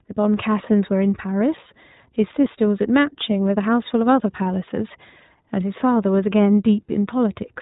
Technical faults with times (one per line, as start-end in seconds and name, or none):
0.00-7.62 iLBC codec